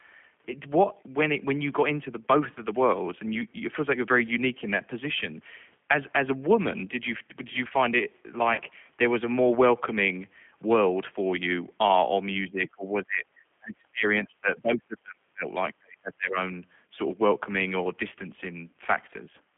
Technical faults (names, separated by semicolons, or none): G.729 codec; VoIP packet loss concealed by the speech codec; speech suppressed in double talk